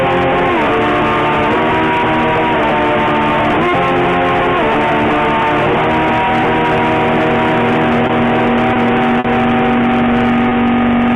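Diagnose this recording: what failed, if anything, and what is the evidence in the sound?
Short stalls from late packets at 8.07–8.12 s, 8.73–8.78 s, 9.19–9.27 s and 10.49–10.54 s point to the network stage and the receiver's jitter buffer. Each time a packet arrived late, the buffer ran dry, and the receiver held the last sound for about 20 ms (50 ms at 9.19 s), giving a brief smeared hold with a faint buzz or dip. Playback then resumed where it left off, so nothing is lost, but overall delay grows at each stall.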